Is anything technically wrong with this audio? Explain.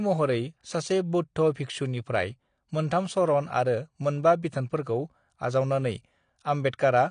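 Yes. AAC compression runs throughout: the speech has nothing above 9.8 kHz and sounds dull and smeared, with a warbling, fizzy texture on sibilants and held sounds. This is likely AAC-LC coding at a low bitrate, around 32 kbps, which lowers the cut-off and starves bands of detail.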